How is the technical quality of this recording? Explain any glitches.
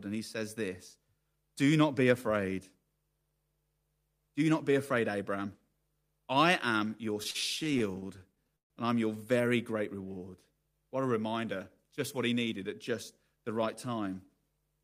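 Quality is hurt by one stuttering passage. Between 7.23 and 8.72 s, after "I am your" and before "and I'm your", there are repeated stalls (stutter). Late packets kept draining the jitter buffer. The receiver stretched the last sound across sixteen brief gaps, the longest 139 ms, covering about a quarter of that span. Nothing is lost, but the speech drags and stutters.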